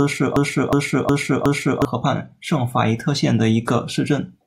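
Right from the start the speech is already stuck in a broken-record loop, and it keeps going until about 1.85 s. A fragment of roughly 364 ms plays four times back to back, identical each time. The likely cause is a player or stream stalling and resending the last chunk it had buffered. Whatever should have been heard in those first couple of seconds is simply gone.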